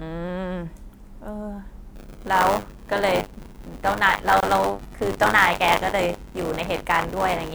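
In this speech clip, the program filling the output ring buffer and the hardware reading it have drifted out of step from 1.95 s to the end, so they cross inside every period. That is buffer tearing. A small slice of each buffer, roughly a seventh, still holds audio from about 40 ms earlier, spliced in with hard edges on both sides. The result is a steady robotic buzz at 100 Hz, which points to a period of about 10 ms, riding on the speech wherever there is signal. Separately, at 4.40 to 4.43 s there is a gap at a join of encoded pieces. Two separately encoded segments were butted together without trimming the encoder's start-up delay and the padding of the final frame, so a gap of about 25 ms opens in the middle of continuous sound. Its edges are smeared by the codec, and the speech then resumes exactly where it broke off.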